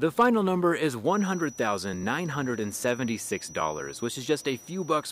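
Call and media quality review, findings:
Hard clipping, 0.19–0.26 s: brief crackle on peaks, tops cut flat by roughly 4 dB of overdrive. Probable component: input gain into converter or fixed-point stage. Flattened peaks add high harmonics.

Feedback whistle, 1.02 s to end: thin steady tone near 5.9 kHz, roughly 20 dB under the signal, swelling and fading slowly in level. Likely cause: speaker-to-mic acoustic loop held just short of runaway, one frequency sustaining.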